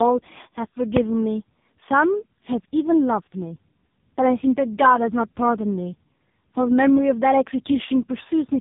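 Tandem speech coding runs throughout: the speech passes through two successive speech coders, the second re-encoding the first's degraded output, leaving it rough, warbly and muffled, with nothing above 3.8 kHz.

Invalid numbers at full scale strike at 0.97 s: a calculation fault pins the output to maximum level for about 1.3 ms, heard as a single loud bang.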